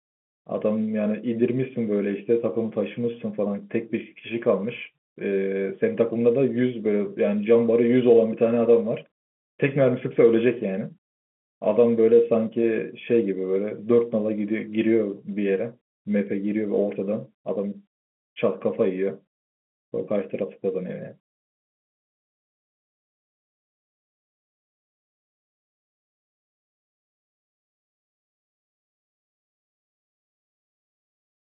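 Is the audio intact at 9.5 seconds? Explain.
Yes, the speech at 9.5 s is intact, with no fault at that moment beyond the narrow telephone band of the G.711 line it travels on.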